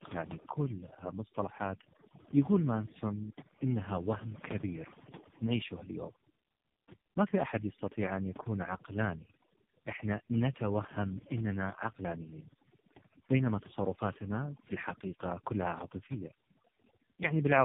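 Speech with two faults running the whole way through. Overdone noise removal: a noise reduction stage set far too strong mutes frequency bands near its noise estimate, leaving near-silent gaps with twinkling specks. Tandem speech coding: the call passed through two low-rate speech coders in a row, each re-coding the other's damage, so the voice is rough, muffled and warbly, with nothing above 3.7 kHz, which fits a G.729A-to-AMR-NB chain.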